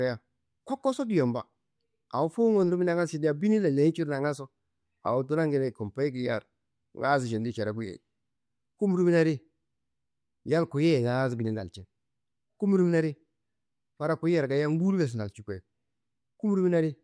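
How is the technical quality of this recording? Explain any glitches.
No glitches or technical faults are audible anywhere in the recording.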